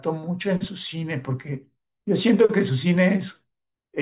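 No faults to report: nothing in the recording stands out as a technical problem at any point.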